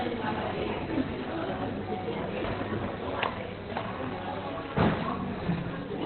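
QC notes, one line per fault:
Throughout, Opus compression: the audio sounds muffled and hoarse, with nothing above 4.2 kHz and heavy codec damage. The likely cause is Opus falling back to its narrowband SILK speech mode, which fits a very low bitrate of about 12 kbps.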